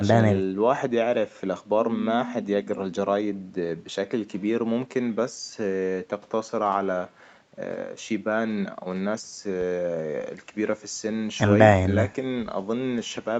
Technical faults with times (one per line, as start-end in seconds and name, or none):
none